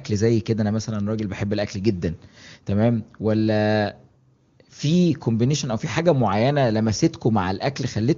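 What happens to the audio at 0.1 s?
Nothing goes wrong at 0.1 s; the speech there is intact, carried through the AMR wideband (HD Voice) codec at a high rate that leaves little or no audible coding damage.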